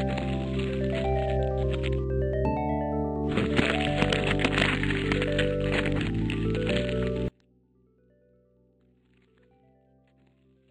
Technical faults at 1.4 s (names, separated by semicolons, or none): none